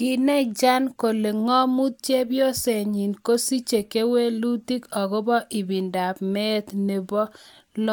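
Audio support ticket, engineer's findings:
Nothing stood out on listening through the speech recording; no fault to log against any component.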